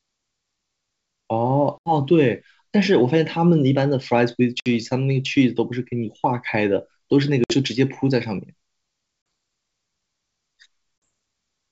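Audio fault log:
1.78 to 11.04 s, packet loss on an ADPCM call: hard-edged silent gaps at 1.78 s (80 ms), 4.60 s (60 ms), 7.44 s (60 ms), 9.22 s (40 ms) and 11.04 s (40 ms). Each time the decoder's predictor and step size drift from the sender's, so speech returns slightly distorted and settles within tens of milliseconds.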